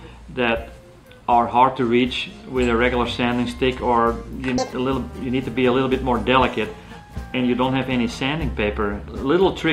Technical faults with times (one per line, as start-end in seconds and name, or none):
4.58-4.73 audio read two samples at a time (double speed)